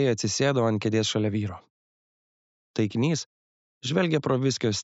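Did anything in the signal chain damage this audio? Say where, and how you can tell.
No, nothing audible points to damage at any stage of the chain.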